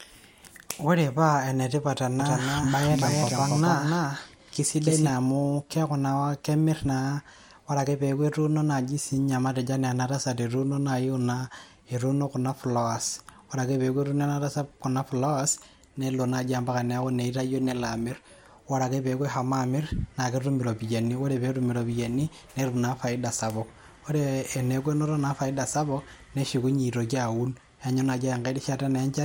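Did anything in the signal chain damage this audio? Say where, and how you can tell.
Yes. From 2.20 to 5.10 s the speech has a doubled audio track: a full-band copy at roughly equal level trails by about 300 ms, likely a second, slower capture path or a misaligned edit. On a spectrogram, every feature repeats about 0.3 s later, with sharp edges and no decay tail.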